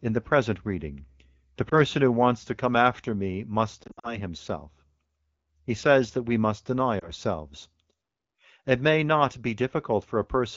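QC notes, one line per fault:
1.69–1.74 s, 3.84–4.21 s and 6.99–7.10 s, lost AMR speech frames: brief dips and warbles, with a stuttering, smeared stretch in the middle. Corrupted radio frames were concealed by repeating the last good speech parameters at falling gain.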